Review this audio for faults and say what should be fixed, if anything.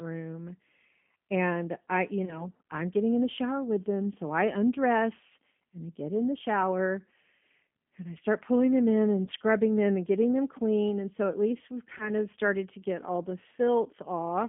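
G.729 codec damage runs through the whole speech clip. It sounds plainly rough and slightly synthetic, which fits an 8 kbit/s G.729A coder rebuilding each 10 ms frame from a vocal tract filter and a handful of pulses. On a spectrogram, energy stops sharply above 3.4 kHz and below 200 Hz, with smeared, grainy harmonics. Using a wideband codec such as G.722 or Opus where the link allows would prevent it.

VoIP packet loss concealed by the speech codec occurs at 2.25 to 2.48 s, 9.25 to 9.30 s and 11.98 to 12.12 s. Each event fits one lost 20 ms packet, but the decoder extrapolates a fading sound from its last pitch and filter and recovers slowly, so the damage lasts longer. The waveform shows repeated, decaying cycles, and the spectrogram shows frozen harmonics. A better jitter buffer with forward error correction or redundant packets, plus QoS priority for voice traffic, would prevent it.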